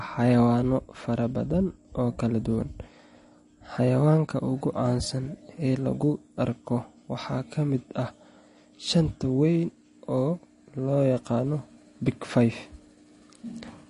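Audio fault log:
Throughout: MP3 compression, plainly audible, likely from a low bitrate near 40 kbps. Nothing above 10.6 kHz survives, and weak spectral lines flicker, making speech watery and sibilants chirpy.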